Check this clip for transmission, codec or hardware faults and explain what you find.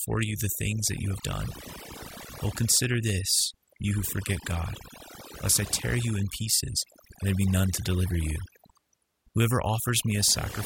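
The clip has one fault, present throughout the speech: overdone noise removal. A noise reduction stage set too aggressively cuts individual frequency bands whenever they sit near its noise estimate, taking quiet speech detail with them. The background drops and breaks up into twinkling, warbling specks.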